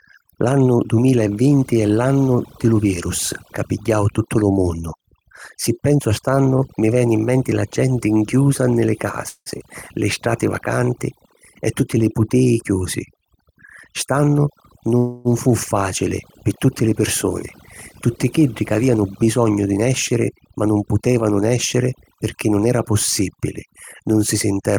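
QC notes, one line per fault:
Throughout: overdone noise removal. The denoiser is set too hard, so the background drops and breaks up into twinkly specks.
6.35–7.03 s: scattered short gaps. About three tiny holes, the longest around 15 ms, each patched by stretching the previous sound, so you get brief ticks or smears.
9.29–9.49 s and 14.98–15.28 s: call audio freeze. The sound hangs as a fading buzz, for 172 ms the first time (the last 60 ms of it silent) and 270 ms the second, then carries on from where it stopped with nothing lost. The likely cause is delayed packets draining the jitter buffer.
13.44–14.29 s and 18.61–20.95 s: jitter buffer speed-up. The receiver trims pitch-period slices to shed backlog, so the speech runs about 5% and then 8% fast at the same pitch, dropping roughly 50 ms and 200 ms.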